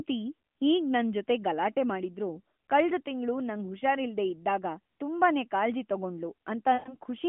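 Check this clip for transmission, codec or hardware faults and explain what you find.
One transmission fault stands out, heard over narrowband AMR speech where the spectrogram shows nothing above 4 kHz. Lost AMR speech frames occur from 6.74 to 6.97 s. Corrupted frames failed their checks, so the decoder repeated the last good pitch and vocal-tract settings at shrinking gain. The roughly 120 ms gap, consistent with about six 20 ms frames, sounds like a smeared, fading stretch. The waveform shows a decaying envelope, and the spectrogram shows frozen, blurred harmonics.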